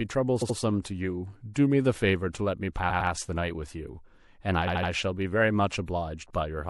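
It's a speech clip with a watery, swirly quality throughout: the treble is cut off and quieter detail flickers in and out. That's most likely MP3 compression at a low rate, something around 64 kbps, where the encoder starves weak frequency lines of bits. On top of that there are three stutters from repeated frames, where a short block gets replayed. At 0.41 to 0.56 s a roughly 78 ms block plays twice more. At 2.89 to 3.10 s a 105 ms block repeats twice. At 4.67 to 4.90 s a 78 ms block repeats three extra times. Each stutter adds 157, 209 and 235 ms to the clip.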